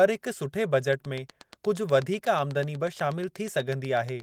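A steady ticking runs over this speech recording from 0.93 s, just after "हिकु सुठे", to 4.21 s: a train of clicks at a regular 8.25 per second, about thirty in all, each a near-identical sharp pop peaking around 10 dB above the speech and audible through the pauses. The cause is likely interference from nearby equipment or a faulty connection or power supply injecting a pulse at a fixed rate, laid over the lightly coded fullband Opus voice.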